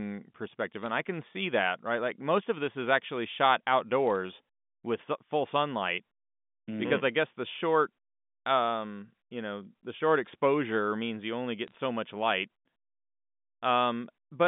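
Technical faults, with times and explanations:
0.83–0.90 s, 4.06–4.18 s and 11.68–11.75 s, bit errors on a digital phone line: bits flipped on the G.711 line in three short bursts, at a rate of roughly one or two bits per thousand, each flip corrupting a single sample. Hits on the sign or upper bits throw samples far off, heard as clusters of sharp ticks and crackle laid over the speech before "i can see that", after "this is actually shot", and between "exposure means you only" and "much light".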